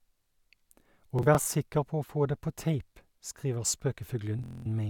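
Bluetooth stutter at 1.19–1.47 s and 4.39–4.66 s: lost packets make the receiver replay short slices, buzzing rather than going silent as a dropout would.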